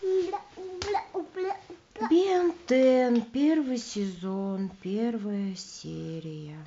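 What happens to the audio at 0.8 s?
Nothing goes wrong at 0.8 s; the audio runs on intact through that moment, with no dropout, click or distortion.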